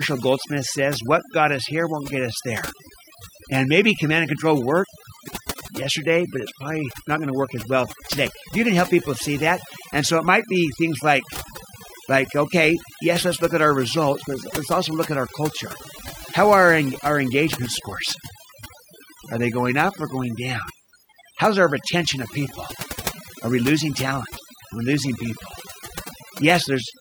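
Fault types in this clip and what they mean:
Overdone noise removal: A noise reduction process was pushed too hard on this noisy speech. Bands near its noise estimate get cut deep or muted. It runs for the whole clip. The background drops and breaks up into twinkling specks. Quiet parts of the voice are cut along with it.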